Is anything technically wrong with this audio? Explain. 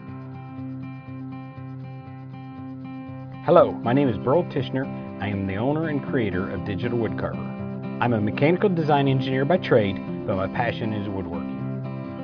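No, there's nothing technically wrong with this audio.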